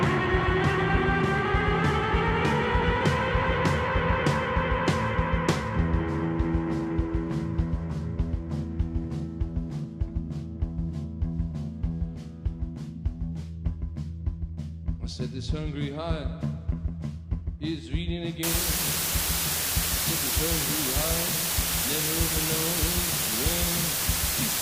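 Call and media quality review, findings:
Low bit depth with dither from 18.43 s to end: constant even hiss, roughly as loud as the sound itself. Points to a 3-bit requantisation stage with dither. Unlike undithered truncation, the error is steady noise, not gritty signal-following distortion.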